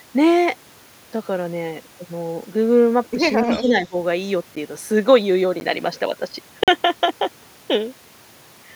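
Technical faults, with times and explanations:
3.44–3.95 s, speech suppressed in double talk: the talker's level sinks by about 15 dB for roughly a third of a second, likely because the echo canceller could not separate this voice from simultaneous far-end sound and ducked both together.
3.5–3.71 s, echo leak: a faint delayed copy of the speech, about 15 dB below it, trails the original by 291 ms, likely because the far end's echo canceller let part of its loudspeaker pickup return down the line.
4.56 s, 5.60 s and 6.64–6.68 s, block of digital silence: the sound cuts abruptly to silence and back. The first two are short ticks and the last is a brief 43 ms hole. These gaps point to output buffers left unfilled in time, fitting one 512-sample buffer each for the first two and four for the last.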